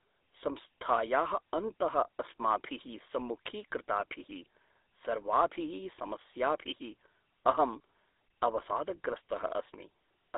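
From start to end the speech carries GSM full-rate codec damage: a plainly buzzy, gravelly roughness from coarse regular-pulse excitation, which fits a 13 kbps GSM coder. Unlike a clean telephone band-limit, the band from 300 Hz to 3.7 kHz also sounds grainy, and nothing passes above 3.8 kHz.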